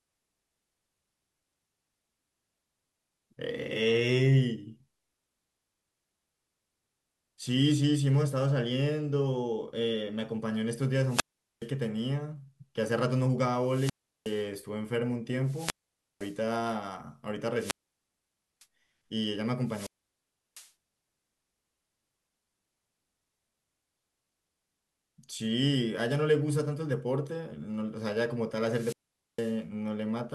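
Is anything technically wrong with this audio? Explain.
Yes. Wireless microphone squelch dropouts occur at 11.04–11.69 s (muted about 0.42 s), 13.55–14.47 s (0.36 s), 15.41–16.40 s (0.51 s), 17.56–18.66 s (0.90 s), 19.64–20.71 s (0.70 s) and 28.62–29.60 s (0.46 s). Each time, the FM radio signal fades, hiss rises, the receiver's squelch mutes the output, and speech returns.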